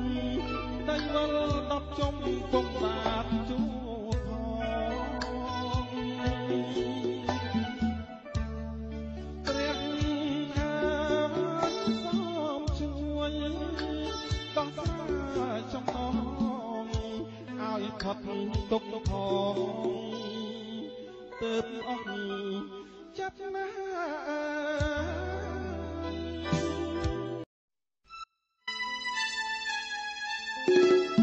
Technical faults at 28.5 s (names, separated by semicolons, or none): audio dropout to a faint residue